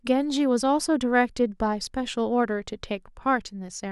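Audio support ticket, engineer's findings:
No faults found in playback.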